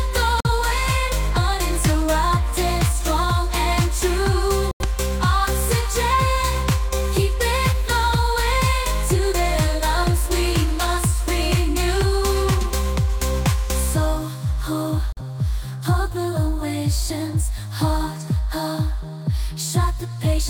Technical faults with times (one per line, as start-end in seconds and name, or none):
0.40-0.50 digital broadcast dropout
4.71-4.85 digital broadcast dropout
15.12-15.21 digital broadcast dropout